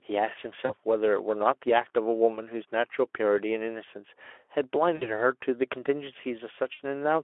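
VoIP packet loss concealed by the speech codec, at 0.66–0.73 s, 4.95–5.11 s and 6.73–6.81 s: packets dropped (about 40, 60 and 60 ms of audio), and the light Speex decoder extrapolated its last pitch, so the speech is stretched and fades.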